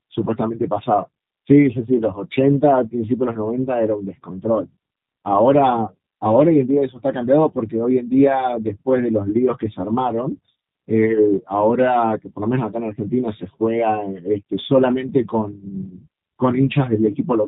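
Speech runs through a G.729 codec for its whole length, with plainly audible damage: a rough, slightly synthetic buzz from the frame-by-frame rebuilt voice, which fits an 8 kbit/s G.729A link. A spectrogram shows nothing above 4 kHz and smeared, blocky harmonics.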